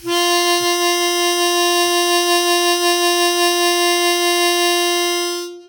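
No technical faults can be heard anywhere in this music clip.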